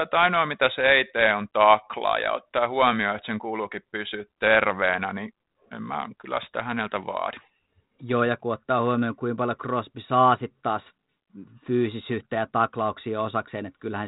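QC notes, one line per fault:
Nothing stood out on listening to this speech clip.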